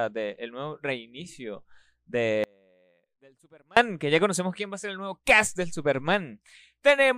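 A speech clip with an audio dropout to a faint residue from 2.44 to 3.77 s. The speech cuts out abruptly for about 1.33 s. The gap is not silent. A faint leak of the signal remains, roughly 35 dB below its normal level. Speech returns just as abruptly on "que ya conocemos quién". The likely cause is a brief loss of the main signal while the path after the break stayed live.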